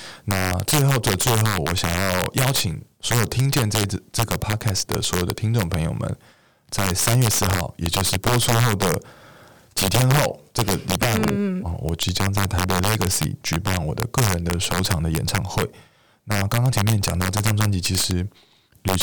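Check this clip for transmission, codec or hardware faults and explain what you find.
Integer overflow runs through the whole recording. The signal is driven about 6 dB past the integer limit. Instead of being clamped, roughly one percent of samples wrap to the opposite sign. Each loud speech peak becomes a violent crack, much harsher than ordinary clipping.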